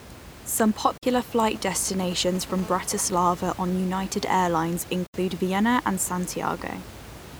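At 0.97 s the speech cuts to silence for roughly 46 ms and picks up later as if it had kept playing. That's a Bluetooth dropout, likely a couple of packets not reaching the headphones in time. The same gap returns at 5.06 s, about 70 ms this time.

In between, from 2.62 to 3.68 s, there's a hard, raspy GSM phone buzz at 217 Hz, rich in harmonics and about 26 dB below the speech. A nearby phone on a call is pulsing its transmitter, and the audio circuitry is rectifying those bursts; because it's a call, the buzz stays nearly steady throughout.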